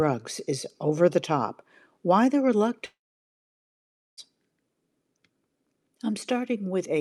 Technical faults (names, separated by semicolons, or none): long network dropout